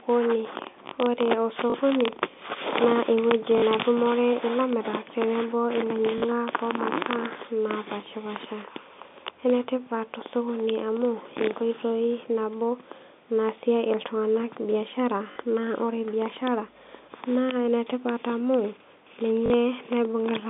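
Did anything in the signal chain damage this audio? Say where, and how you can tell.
Yes, in the network stage: packet loss with last packet repeated, at 1.7, 3.58, 6.18, 15.32 and 19.46 s. Each gap lasts 40 ms, which fits two lost 20 ms packets. The receiver replayed the last packet until new audio arrived. Because each repeat is one 20 ms packet, the run buzzes at about 50 Hz, a brief robotic stutter, as between "naa ewueji" and "netumore ilamirak tenebo", and between "naasie iltunganak biashara" and "naa ore biashara".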